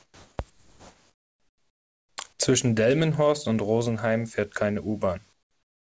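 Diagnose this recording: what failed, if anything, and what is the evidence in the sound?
The fault sits in call processing: comfort noise in place of the background. The pauses at 0.00 to 0.38 s, 0.50 to 2.18 s, and from 5.33 s after "fährt keine" to the end sound flat and featureless, without the room's detail. The level drops by about 2 dB, 5 dB and 18 dB. The likely cause is discontinuous transmission: the sender stopped sending during silence, and the receiver synthesised steady noise in the gaps. Around it, the G.722 path carries nothing above 8 kHz.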